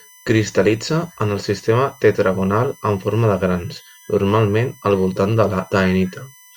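A thin, steady whine sits under the speech from start to finish. Its pitch never moves, built on 1 kHz with its loudest component at the sixth multiple, 6 kHz, and it runs roughly 30 dB below the speech. This is USB whine: the bus pulls current in regular 1 ms frames, and that pulsing leaks through the shared power or ground into the audio path as a fixed-pitch tone and its harmonics.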